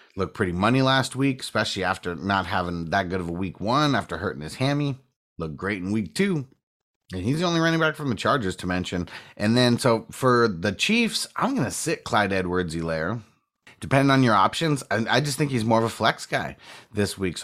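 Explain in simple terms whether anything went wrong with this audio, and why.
Nothing went wrong that can be heard: careful listening to the speech turned up nothing that stood out as a problem at any point.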